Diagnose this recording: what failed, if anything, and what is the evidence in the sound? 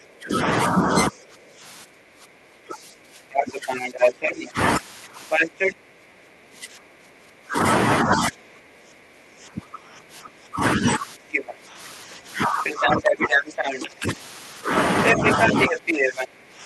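Stage here is call processing, specifically the echo canceller. From the start to about 14.09 s, and again from 15.13 s to the end, the talker keeps dipping, by about 10 dB at the deepest, for roughly ten seconds in total. That's speech suppressed in double talk. Most likely the canceller couldn't tell the near-end talker apart from loudspeaker echo while both sides were active, so it ducked everything together, and the talker paid for it.

Same stage, the other half of that failure: the other side's voice leaking through. There's a faint scrap at 1.24 to 1.29 s, about 40 dB under the talker. Then come longer stretches at about the talker's own level, at 3.32 to 5.74 s, 11.32 to 11.53 s, 12.64 to 13.89 s and 15.05 s to the end. The far end is likely being played out of the loudspeaker and picked up again by the mic, and the canceller isn't removing it. The codec path itself sounds normal, with the top end stopping around 12 kHz as Opus does at these settings.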